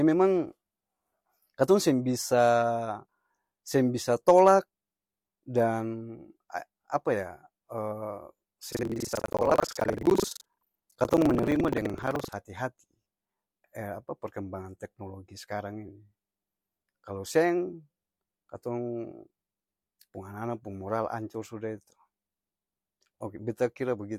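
From 8.70 s to 12.37 s the speech takes on a robotic rattle, a buzz at about 23.4 Hz that persists and rides only on the speech. This is buffer tearing: the writing program and the playback hardware have drifted so their positions cross within each buffer period, which fits a 2048-sample buffer. Roughly a third of every buffer replays audio from around a tenth of a second earlier, hard-joined on both edges.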